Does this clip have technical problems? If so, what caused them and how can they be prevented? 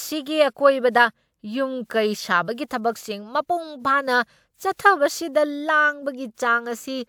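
No, this speech has no audible technical problems. With no fault present, there is nothing here to prevent.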